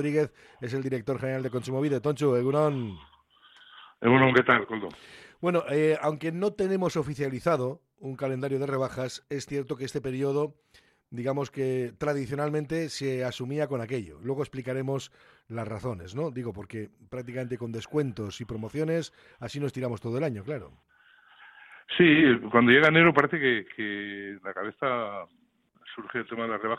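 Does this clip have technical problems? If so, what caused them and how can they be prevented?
No, there are no technical problems to report here.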